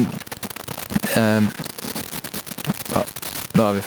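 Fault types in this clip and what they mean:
stuck bit: A data bit in the converter or its wiring is likely held fixed, pushing roughly half the samples off by that bit's weight. Throughout the speech this adds grainy noise or buzzy distortion, depending on which bit is stuck, and pauses fill with a hiss that flips with quiet values.
gain pumping: The input gain is likely set far too high, so a fast limiter clamps down on each loud syllable and lets go between them. The level swings by around 10 dB, sounding squashed.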